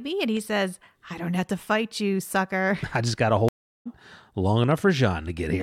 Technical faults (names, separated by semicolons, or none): dropped samples; stream reconnect